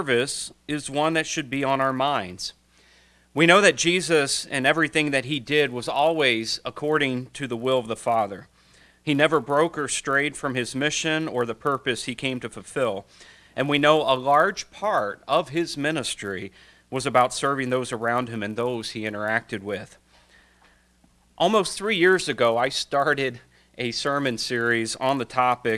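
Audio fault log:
throughout: resampler restarted on every block. The sample-rate conversion from 48 kHz down to 24 kHz was run separately on each 10 ms block, and the converter was started fresh each time. At every block edge it filtered against silence or the wrong end of the block in place of the real neighbouring samples, which leaves a small error at each seam. With edges every 10 ms, those errors merge into a buzz at 100 Hz that follows the signal and disappears in silence.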